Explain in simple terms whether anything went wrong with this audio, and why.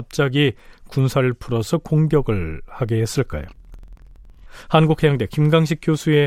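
Planar audio read as interleaved, from 3.49 to 4.5 seconds. The speech jumps an octave higher and flutters rapidly. The audio was stored in chunks about 46 ms long, each holding all the left-channel sound followed by all the right. The player treated them as alternating left-right pairs, so each chunk plays twice at double speed. The overall pace stays normal, but the pitch doubles and a flutter appears about 21 times a second.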